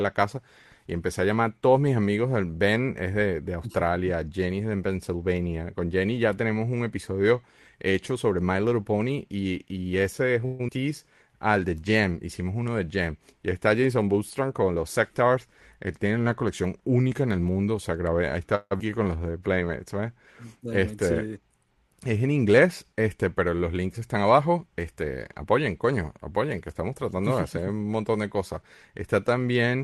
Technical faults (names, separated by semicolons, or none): call audio freeze; skip ahead; jitter buffer slow-down; jitter buffer speed-up; long network dropout